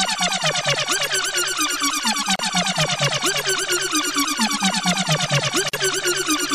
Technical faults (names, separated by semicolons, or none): gap at a join of encoded pieces